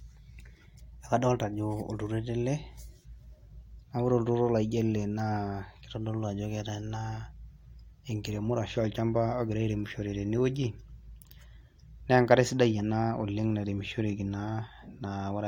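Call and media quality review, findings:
No faults found in the speech clip. No dropouts, glitches or level problems can be heard anywhere in the audio.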